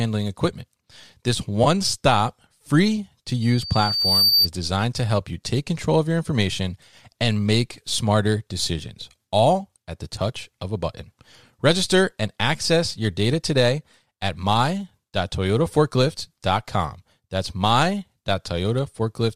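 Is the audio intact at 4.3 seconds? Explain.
No. From 3.41 to 4.49 s, between "stop free to" and "designed to help you", a microphone feeds back through its loudspeaker, so a 4.6 kHz loudspeaker feedback squeal swells over under a second to sit about 5 dB above the speech. At 4.30 to 4.33 s, AAC frame loss with concealment drops about 20 ms of audio, and the decoder patches the gap from its last good spectrum, leaving a brief smeared, phasey blur.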